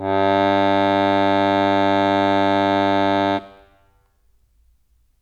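Nothing goes wrong anywhere in this bit of music; there's no technical fault to point to from beginning to end.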